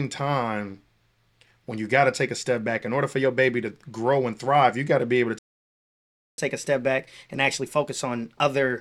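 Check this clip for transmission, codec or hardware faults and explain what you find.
Two related playback faults are present, both in the player's handling of the stream rather than in the codec or audio hardware.

Playback stall, 5.39 to 6.38 s: the speech stops mid-flow and the output goes silent for about 1.0 s before sound resumes. The likely cause is the player's buffer running empty, or its audio thread being blocked, so nothing reaches the output until data is available again.

Catch-up at higher speed, 6.38 s to the end of the clip: once output resumes, the player works through its accumulated backlog by resampling it to run 1.1 times faster. Because resampling changes speed and pitch together, the speech sounds hurried and raised by roughly one and a half semitones. The faster rate lasts to the end of the clip, so the return to normal speed is not heard.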